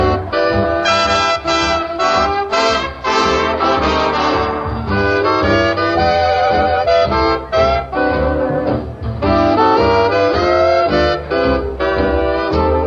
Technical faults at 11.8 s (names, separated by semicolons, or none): none